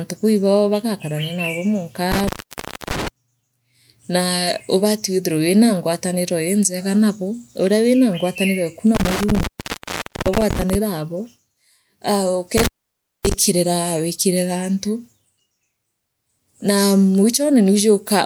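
The speech drops out with crackle at the edges three times: 2.12 to 3.08 s (open for about 0.62 s), 8.95 to 10.75 s (0.83 s) and 12.57 to 13.34 s (0.58 s). This is intermittent contact, a loose cable or plug briefly opening the signal path.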